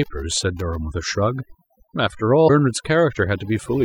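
A speech recording carries three technical faults. Overdone noise removal runs throughout. The noise reduction was set so aggressively that individual frequency bands near its noise estimate are pulled down or switched off entirely, and the quieter components of the speech are removed along with the hiss. The background sits at near silence, broken by twinkling specks where isolated bands pop through. Between 0.03 and 0.76 s there is a train of clicks: about ten sharp pulses at around 11 per second, irregularly spaced and peaking roughly 10 dB above the speech. The clicks share much the same shape and cut across both the speech and the gaps, giving a ticking, popping layer over the opening of the clip. The likely source is electrical interference from nearby equipment or a faulty connection or power supply. From 2.44 to 2.50 s, damaged data in a compressed stream produces a short glitch. 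Corrupted or missing bytes left the decoder unable to read the frames at that point, so it lost sync and skipped forward to the next valid frame header, causing the brief disruption.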